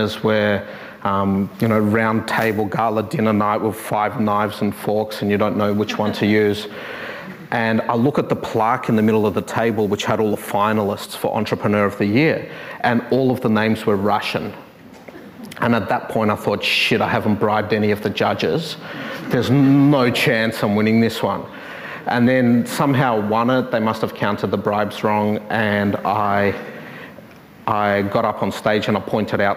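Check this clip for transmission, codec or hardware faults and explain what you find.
Nothing wrong turns up here: the audio runs along steadily, with no transmission, codec or hardware trouble to report.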